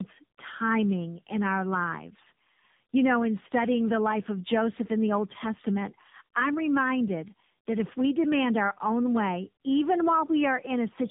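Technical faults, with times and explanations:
Throughout, tandem speech coding: the speech has passed through three separate speech coders in a row, going from CVSD to G.711 mu-law, then AMR-NB at 7.95 kbit/s, back through G.711, and finally AMR-NB at 10.2 kbit/s. Every hop decodes and re-encodes what the previous one had already mangled, so the errors pile up. That's why it sounds rougher, duller and more warbly than a single link would, with nothing left above 3.7 kHz.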